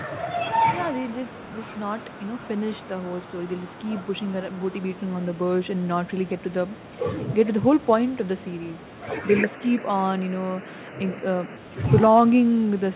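From the start and through the whole clip, every phrase is trailed by a quieter, thinner copy roughly a third of a second later, about 20 dB below the direct speech. This is echo with no canceller: the far end's loudspeaker feeds its microphone and the sound returns over the network unremoved. On a waveform each burst has a small delayed twin; a spectrogram shows faint repeated speech patterns offset in time, which blur syllable edges.

At 9.38 s the tone turns duller and boxier. This is most likely an input switched to a poorer device. The spectrogram shows the energy band narrowing below the 4 kHz ceiling of the G.711 call path heard elsewhere, with a new haze of background noise around 30 dB under the speech. The waveform shows no gap and no level jump at the change. The fuller sound returns at 11.57 s.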